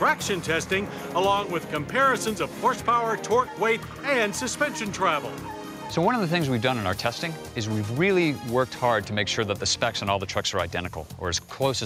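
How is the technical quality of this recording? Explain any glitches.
No technical glitches can be heard anywhere in the recording; the signal stays continuous, with no interruptions, distortion or other faults.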